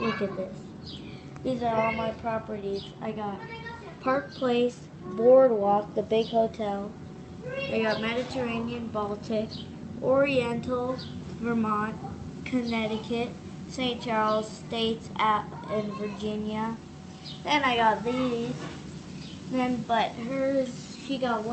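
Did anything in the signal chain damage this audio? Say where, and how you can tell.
No, nothing in the chain has damaged this audio. It went through a call path whose codec rolls off the top end at about 8 kHz, consistent with Opus at a moderate bitrate around 32 kbps, and that band limit is the codec working as designed.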